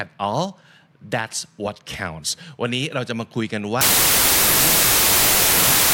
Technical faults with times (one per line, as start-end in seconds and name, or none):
3.81-5.93 wrong sample width